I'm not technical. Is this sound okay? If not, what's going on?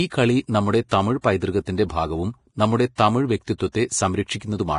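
No. The speech sounds hissy and grainy throughout, with dull treble and nothing above about 10.5 kHz. That is likely heavy Vorbis compression, not ordinary background noise.

Pre-echo also appears: a brief hiss arrives just before a sharp sound, not after it as a normal echo would. You can hear it at 0.89–0.91 s after "കളി നമ്മുടെ", at 1.65 s between "കളി നമ്മുടെ തമിഴ്" and "ഭാഗവും നമ്മുടെ തമിഴ്", at 2.95–2.98 s, at 3.58–3.60 s, and at 3.72–3.75 s after "ഭാഗവും നമ്മുടെ തമിഴ്".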